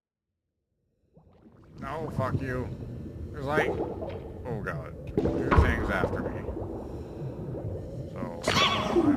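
No technical faults can be heard; the opening fade-in is smooth.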